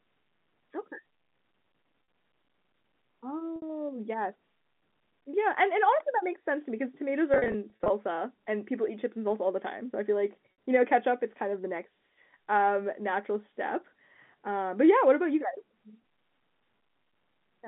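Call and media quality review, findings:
Packet loss with pitch repetition at 2.04–2.08 s (40 ms), 3.56–3.62 s (60 ms), 10.52–10.58 s (60 ms), plus a scattered burst at 7.34–7.90 s (220 ms lost over 560 ms, no gap over 40 ms). Jitter buffer or network concealment repeats the last pitch period, so each gap is a brief held, buzzy tone rather than a silent dropout or click. G.711 line band, roughly 150 Hz–3.5 kHz, is audible throughout.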